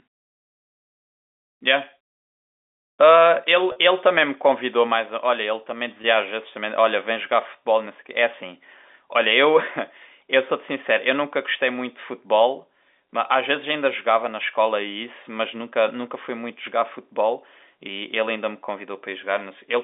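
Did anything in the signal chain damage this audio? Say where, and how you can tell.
Yes. Packets were lost on the network, and the receiver bridged each gap with packet loss concealment by pitch repetition, looping the last pitch period. At 3.72 s a 40 ms hole, consistent with two packets, becomes a briefly held, buzzy tone. At 6.02 s, 20 ms does the same, more briefly.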